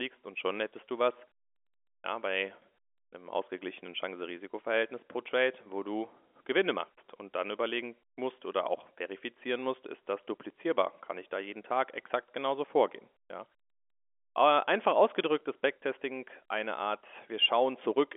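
No faults can be heard in this telephone-band speech.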